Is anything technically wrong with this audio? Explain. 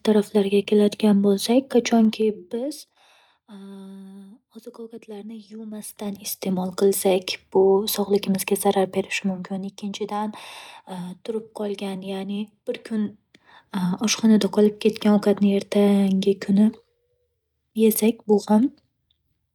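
Yes, zipper noise appears in the speech four times: 1.96–3.07 s (about 20 dB down), 5.63–6.66 s (about 20 dB up), 9.13–9.73 s and 12.80–13.91 s (about 10 dB down, then up). The gain moves in unsmoothed 2 dB, then 1 dB, jumps, roughly ten a second, each leaving a click. This ticking during a fade is what separates it from a clean fader move.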